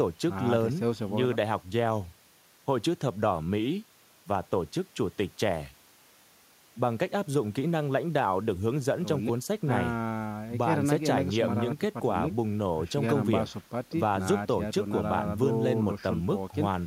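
Nothing in this speech recording points to a technical fault. There are no events to place in time and nothing that needs a mechanism explained.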